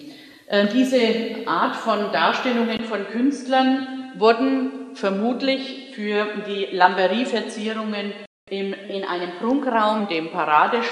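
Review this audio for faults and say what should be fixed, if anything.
At 2.77 s the sound drops out for about 20 ms. When it returns it is duller. Nothing is present above 10.5 kHz, and a new noise floor sits roughly 50 dB below the signal. The level stays about the same. This continues to the end. The likely cause is an input switched to a poorer device, with the system changing its input mid-recording. The replacement passes a narrower band and brings its own background noise. Lock the input device for the whole session so the system cannot switch sources.

From 8.26 s to 8.48 s there is a digital broadcast dropout. The sound fades out over about 3 ms and is gone for 216 ms, then returns. That gap fits roughly nine lost frames. The receiver muted because it stopped getting valid data, so the content of that stretch is gone. Re-capture this section from a stronger or more reliable signal, and improve reception or error protection to prevent repeats.

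From 8.85 s to 10.00 s everything runs about 5.6% fast. Pitch rises about 95 cents, close to a semitone. Then it snaps back. This is likely a drift correction step. Clock-matching software jumped its playback rate in one move to rebalance its buffer, and it held the new rate for just over a second. Speed and pitch move together, so the passage sounds detuned. Use a shared clock, or a resampler that corrects drift gradually rather than in steps.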